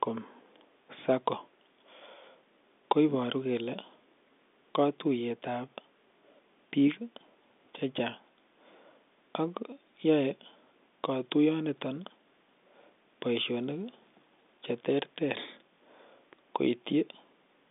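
No technical faults can be heard anywhere in the speech. It comes over a G.711 telephone line, with the sound held to roughly 250 Hz to 3.6 kHz and nothing above about 3.7 kHz.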